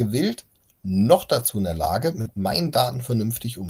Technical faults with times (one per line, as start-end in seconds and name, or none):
1.39-1.49 lost packet rebuilt from error correction
2.21-2.27 short concealed packet loss
2.25-2.27 lost packet rebuilt from error correction